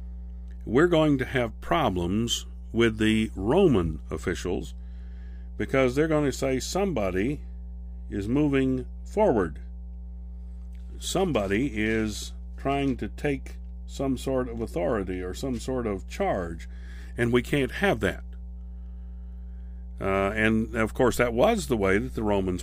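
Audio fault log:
throughout mains hum: a steady 60 Hz tone sits about 15 dB below the speech, leaking in from the power line through a ground loop or nearby transformer. Unlike broadband rumble or wind noise, it holds one fixed pitch and never changes with the speech.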